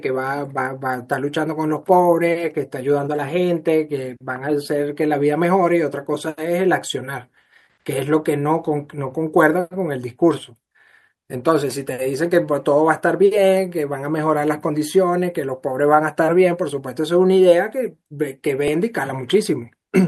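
At 18.68 s a short, hard click cuts into the speech, a tiny buzzy tick rather than an audible stutter. This is a repeated buffer: fresh audio reached the playback device too late, so it replayed the last chunk it held, here a couple of extra times back to back. Each piece lasts only about 2.7 ms, which fits a 128-sample buffer, so the repeats fuse into a click. No audio seems to be lost.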